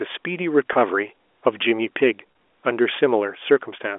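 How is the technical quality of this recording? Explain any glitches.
Two brief dropouts are the only glitches, both packet loss with pitch repetition, heard over a telephone-band line that carries the speech with the usual narrow 300 Hz to 3.5 kHz range. The first sits at 0.73 s and lasts about 20 ms. The second runs from 2.32 to 2.35 s, about 30 ms. Each time, some audio never arrived, and the receiver filled the hole by looping the last pitch period. With gaps this short there's no fade into silence, just a quick buzzy, held moment where the voice briefly freezes before it carries on. The lengths point to two or three small lost packets each time.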